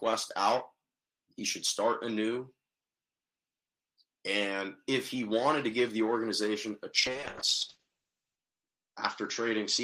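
Audio carried over a WebRTC call path with Opus coding shows a call bitrate drop from 7.01 s to the end. The sound turns rough and watery, and the top end collapses to an 8 kHz cut-off, consistent with the encoder falling from about 32 kbps to roughly 7 kbps after the bandwidth estimate fell, with the worst stretch lasting 1.37 s. On a spectrogram, energy above 8 kHz vanishes abruptly at 7.01 s, and the remaining band looks blotchy and smeared.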